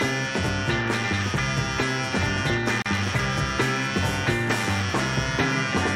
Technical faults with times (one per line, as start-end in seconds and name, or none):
2.82-2.86 gap at a join of encoded pieces